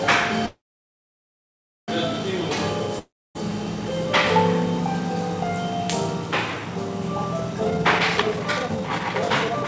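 At 0.46 s the sound stalls into a brief fading buzz, then drops to silence for about 1.3 s before resuming at 1.90 s exactly where it left off, with nothing skipped. This is a call audio freeze, most likely caused by packets held up in transit until the jitter buffer ran dry. The receiver stretched the last sound into a decaying tail and then waited, so about 1.4 s of gap was inserted into the audio, delaying everything after it by that amount.

From 2.99 s to 3.37 s there is a similar short buzz fading into roughly 0.27 s of silence, but here the sound comes back further along, with about 0.36 s of material gone. That is a long network dropout: the audio for that stretch likely never reached the receiver, so the concealment tail and silence stand in for a piece that was lost outright rather than merely delayed.

From 7.60 s to the end the sound runs hurried, at about 156% of normal speed, while the pitch stays unchanged. 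This is a jitter buffer speed-up. Having built up more delay than its target, the buffer cut many short pitch-period slices in quick succession to catch up, discarding around a second of audio in total. Throughout, the call path keeps the audio band-limited to 8 kHz, which fits G.722.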